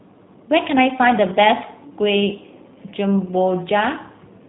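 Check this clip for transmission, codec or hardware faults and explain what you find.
There's one fault, and it runs the whole length: G.729 codec damage. Everything above 3.9 kHz is gone, and the speech sounds rough and synthetic because it's rebuilt from a filter, pitch and sparse pulses, which fits an 8 kbit/s link.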